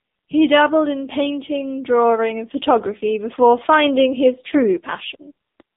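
Speech runs the whole clip through the AMR narrowband mobile codec. Nothing above about 3.8 kHz survives, and the line band sits between roughly 150 Hz and 3.7 kHz, so the sound is thin and boxy. Codec damage is heavy. The voice comes out buzzy and synthetic, which fits a low AMR-NB mode near 6.7 kbps. At that rate the vocal-tract model gets too few pulses per 5 ms slot to rebuild detail.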